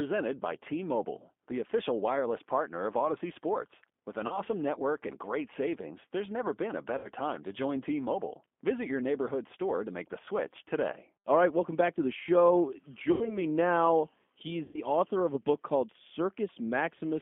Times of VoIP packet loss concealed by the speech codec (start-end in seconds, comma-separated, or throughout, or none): 4.27-4.37, 6.98-7.09, 13.12-13.43, 14.65-14.80